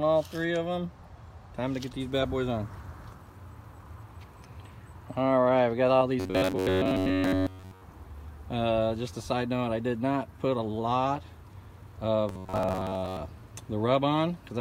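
From 6.20 to 7.84 s and again from 12.29 to 13.17 s, the sound turns into a rigid metallic buzz near 93.8 Hz. This is robotic sound from repeated short buffers, likely caused by late audio forcing roughly 10.7 ms chunks to repeat over most of each span.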